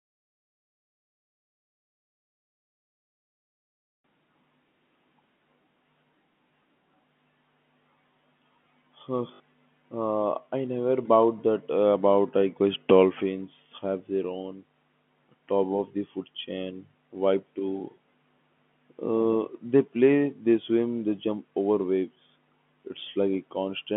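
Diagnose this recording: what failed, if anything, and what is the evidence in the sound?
Network packet loss with the last packet repeated, 9.34 to 9.40 s: a 60 ms robotic stutter that fits three 20 ms packets replayed, buzzing near 50 Hz rather than falling silent.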